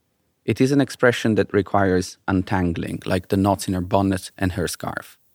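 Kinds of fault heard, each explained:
Pre-emphasis left on: from about 2.87 s to the end, the treble carries a boost that was meant to be undone by a matching de-emphasis stage, and that cut never happened. The curve fits the 50 µs FM standard, lifting 10 kHz about 11 dB above 1 kHz, so the sound turns thin, bright and sibilant. On a spectrogram the upper bands brighten abruptly at that point, and the waveform looks spikier, dominated by fine high-frequency detail.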